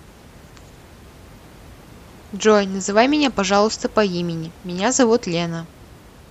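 Nothing technical goes wrong in this speech recording, and the only thing in the background is the room's own noise, sitting about 25 dB below the speech.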